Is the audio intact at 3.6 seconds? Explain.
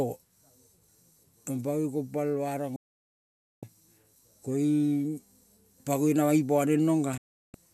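No. A digital broadcast dropout runs from 2.76 to 3.63 s. The receiver lost valid frames and muted until good ones returned, so the speech fades out in about 3 ms and falls silent for roughly 0.86 s. Everything sent during that gap is gone.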